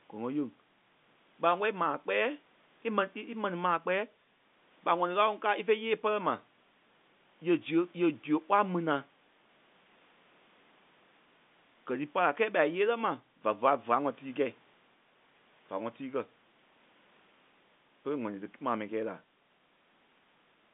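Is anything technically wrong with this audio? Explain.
No, nothing is technically wrong with this audio.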